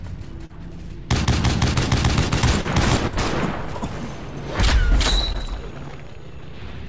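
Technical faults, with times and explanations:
0.46 to 0.51 s, 2.61 to 2.66 s and 5.32 to 5.36 s, short concealed packet loss: about 40 ms, 40 ms and 20 ms of audio never reached the decoder in time. The receiver bridged each gap by extending the preceding sound and then blending back into the real signal, so each spot is a brief smear or wobble rather than silence. Unlike a plain dropout there is no hole or hard click, and the spans are too short for longer concealment's buzzy, robotic drone.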